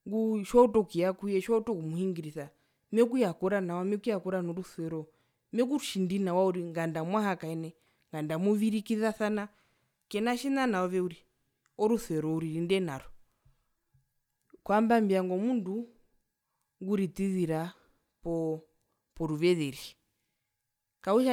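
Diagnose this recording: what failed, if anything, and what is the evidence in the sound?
No fault found in this recording.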